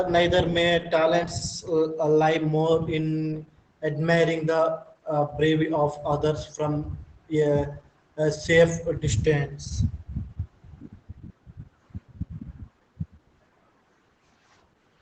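Throughout the clip the speech sounds muffled, slightly hoarse and faintly robotic, with nothing above about 8.7 kHz. This is plainly audible Opus voice compression in its wideband SILK linear-prediction mode, coding the excitation coarsely at a low bitrate, which fits roughly 12 kbps.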